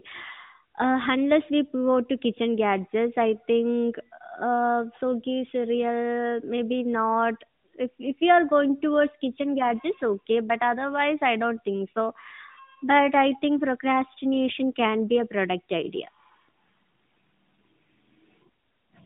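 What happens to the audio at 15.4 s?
Nothing goes wrong at 15.4 s: the speech passes through that moment intact, with no dropout, click or distortion, only the narrow telephone-band sound of the AMR narrowband mobile codec that carries the whole line.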